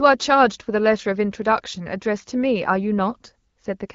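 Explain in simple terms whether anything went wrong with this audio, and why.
Something did go wrong, briefly. From 1.56 to 1.60 s, the speech turns rough and scratchy for a moment. That is AMR bit errors. A small share of the bits in the phone-call data arrived flipped. These were the less protected bits, so the call kept going. But the decoder rebuilt the sound from wrong details. The pitch and loudness stay about the same, yet the voice sounds hoarse. The short length fits about two damaged frames.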